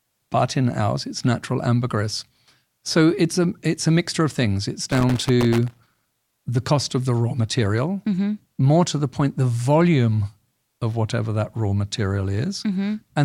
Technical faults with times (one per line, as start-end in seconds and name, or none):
4.92-6.28 loose connector crackle